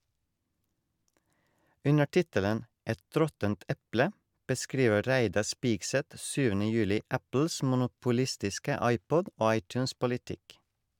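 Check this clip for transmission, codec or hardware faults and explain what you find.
No faults are audible anywhere in this speech recording. Nothing in what can be heard calls for further explanation.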